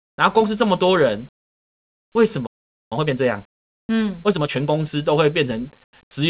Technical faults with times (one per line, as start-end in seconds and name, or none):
1.43-2.15 comfort noise in place of the background
2.13-2.15 onset clipped by the voice detector
2.46-2.92 playback stall
2.92-4.68 time-compressed catch-up
3.59-3.89 comfort noise in place of the background
5.84-5.93 comfort noise in place of the background